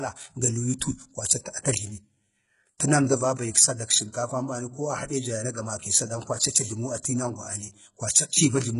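From start to finish, the speech carries heavy coding damage. The treble sounds bright but synthetic. Sibilants come out gritty and lispy, with a metallic edge. Nothing sits above about 11.1 kHz. The likely cause is HE-AAC compression at a very low rate, which fits roughly 12 kbps. The codec keeps only the lower spectrum. It fakes the top by copying lower bands upward under a coarse envelope. Those copied harmonics do not line up with the real ones.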